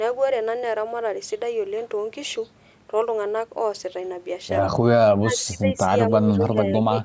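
Speech suppressed in double talk likely occurred, with the echo canceller mistaking the talker for loudspeaker echo and turning it down. The speech dips by about 15 dB from 5.19 to 5.91 s, then by about 25 dB from 6.1 s to the end.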